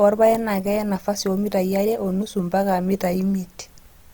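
A short speech clip carrying audible Opus compression damage throughout. The voice sounds grainy and rough rather than swirly. The texture points to Opus in its music (CELT) mode. Here the encoder keeps each band's energy but fills starved bands with folded or noisy content, so detail turns gritty. The bandwidth stays full, reaching about 20.3 kHz. The strength of the artefacts fits a low bitrate of about 24 kbps. Lossy encoding is the likely cause.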